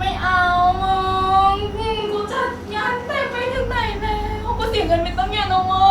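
It's a speech clip, and from about 2.00 s to 3.55 s the sound abruptly turns roomy and hollow, then snaps back just as suddenly. That's a switch to a distant microphone: the close mic likely dropped out and a farther pickup, such as a camera mic, filled the gap. Loudness stays about the same across the change, and the room noise in that stretch sits around 35 dB under the speech.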